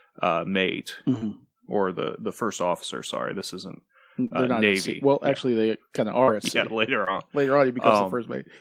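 Short concealed packet loss occurs at 1.18, 4.27, 6.23 and 7.04 s, with gaps of roughly 30, 30, 40 and 20 ms. Each time, a sliver of the speech arrived too late for the decoder, which covered it by extending the preceding sound, pitched or noise-like to match, before blending back into the real signal. Each gap is heard as a brief smear or wobble.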